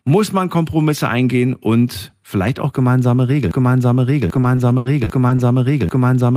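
At 3.51 s the speech falls into a broken-record loop. A fragment of about 0.79 s is repeated exactly and back to back until the clip ends, and the speech that belonged in that stretch never arrives. The most likely cause is a player, encoder or stream that stalled and kept outputting the last buffer it held, which gives the stuck, cycling quality.

From 4.35 s to 5.40 s, right after "eingehen und vielleicht auch", repeated packet loss produces a choppy, robotic sound. A series of short holes opens in quick succession. The longest is about 80 ms, and roughly 180 ms of audio in total is missing. All of it is patched by stretching the preceding sound, with around 150 ms of that roughly rebuilt. These concealed patches cover about 17% of the span and account for the fragmented texture.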